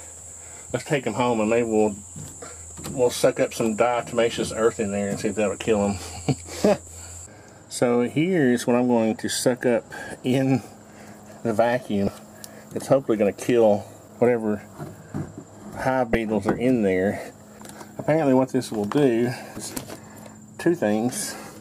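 Brief blips break through the sound at 2.70 s, 6.87 s, 12.05 to 12.08 s, 16.13 s and 19.54 to 19.57 s. Each is damaged data in a compressed stream: corrupted bytes make the decoder misread frames and lose sync until it finds the next valid header.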